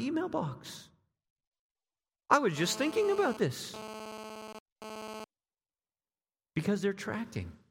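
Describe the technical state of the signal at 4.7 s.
A nearby 2G handset sending data in bursts is being picked up and rectified by the audio circuitry, producing GSM phone buzz from 2.57 to 5.24 s, after "I was". It is a harsh, raspy 217 Hz buzz with dense harmonics, about 12 dB below the speech, that cuts in and out.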